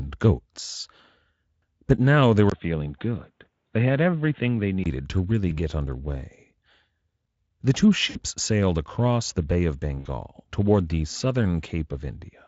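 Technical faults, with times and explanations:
2.50–4.86 s, input switched to a poorer device: likely a change of microphone after "now they", with a 20 ms gap, nothing above 3.8 kHz, the level about 5 dB lower and faint new background noise, until the sound clears before "to really".
5.49 s, 8.09–8.19 s and 9.99–10.07 s, VoIP packet loss concealed by the speech codec: the decoder fills gaps of 20, 60 and 60 ms, the second before "sailed across the", by extending the preceding sound into a buzzy, fading tone that stays weak briefly afterward.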